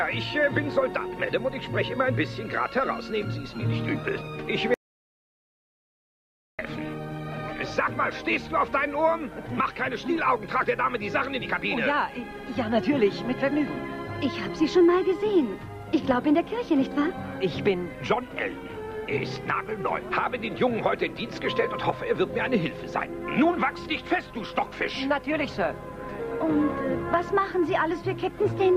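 At 4.74 s the sound stops dead and the clip falls into silence, with not even the faint background hiss of the room remaining, until it resumes abruptly at 6.59 s. This audio dropout to silence removes about 1.85 s of material outright. The likely cause is a brief loss of the input signal, such as a disconnected device or failed link, while the recorder kept writing silence through the gap.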